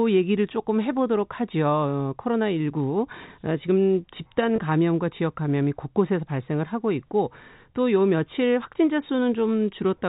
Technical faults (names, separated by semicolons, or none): packet loss with pitch repetition